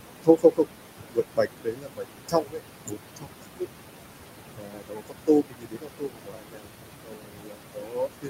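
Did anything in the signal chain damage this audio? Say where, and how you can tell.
Yes, the damage comes from call processing, specifically the noise suppressor. Noise suppressor artifacts run through the whole clip. The room noise, which sits only about 8 dB below the speech, is pulled down by about 21 dB in the gaps and then comes back under the speech. The suppressor applies per-band gain frame by frame, and that gain keeps switching between the noise floor and the speech.

Speech cut by the noise suppressor shows up in five stretches: 0.23–0.7 s, 1.07–2.98 s, 3.16–3.67 s, 4.56–6.77 s, and from 7.03 s to the end. In each stretch, parts of the speech drop by about 21 to 22 dB and sound swallowed or faint. About 1.5 s of the second stretch is affected and about 2 s of the fourth. The suppressor treats those speech bands as noise and attenuates them.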